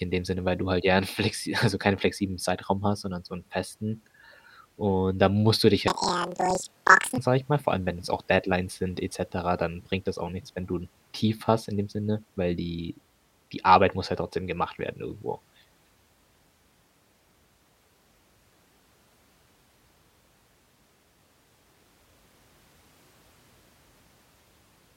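A speech recording in which, from 5.88 to 7.22 s, planar audio is read as interleaved. Each block of roughly 46 ms, which fits 2048 samples per channel, plays twice at double speed, left then right. The voice jumps an octave up with a flutter near 21.5 Hz. A spectrogram shows harmonics spread twice as wide with vertical seams every 46 ms. The waveform shows short compressed segments repeating in pairs.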